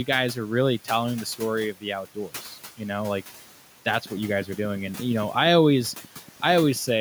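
A noise suppressor is running over this speech clip throughout, pulling the room noise, which sits about 17 dB below the speech, down by about 11 dB between phrases and letting it rise again under the speech. The background audibly pumps. From 4.06 s to 6.89 s, a train of clicks, likely from electrical interference or a faulty connection or power supply, adds around thirty similar ticks at a regular 8.5 per second. They are roughly as loud as the speech and stay audible through the pauses.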